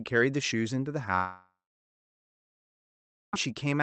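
From 1.15 s to 3.34 s the speech stops arriving, most likely a long network dropout. For the first few tenths of a second the receiver stretches the last sound into a fading buzz, and then about 1.76 s of near silence follows. When audio resumes at 3.34 s, roughly 2.2 s of speech is simply gone, not delayed. The surrounding audio is band-limited near 8 kHz, which fits an Opus call path.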